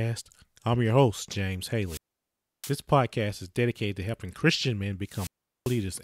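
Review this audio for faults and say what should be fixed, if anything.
Two wireless microphone squelch dropouts break up the speech, from 1.84 to 2.75 s with about 0.67 s of muting and from 5.05 to 5.86 s with about 0.39 s muted. In each, the FM radio signal weakens, hiss swells, and the receiver's squelch then cuts the output to near silence until the signal recovers. That rising static before each hole is what separates this from a digital link dropout or an edit gap, which go silent abruptly with no noise lead-in. To prevent it, keep line of sight between transmitter and receiver, shorten the distance or use diversity antennas, and choose a clear frequency.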